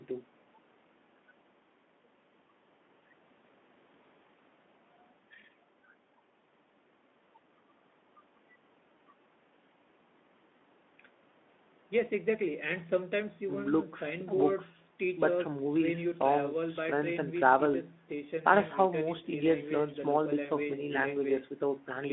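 There are no technical faults to describe in time order in this speech clip.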